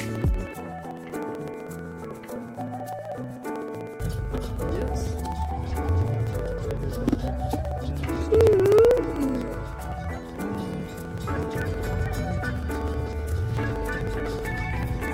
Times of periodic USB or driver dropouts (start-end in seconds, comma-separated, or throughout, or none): 0.09-15.08